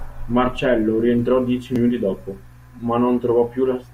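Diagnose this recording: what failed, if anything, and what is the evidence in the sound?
An unreliable data bit at the converter from 1.47 to 1.97 s adds a fizzing crackle, heard in pauses too; the waveform shows identical spikes near -46 dBFS, and the spectrogram broadband specks.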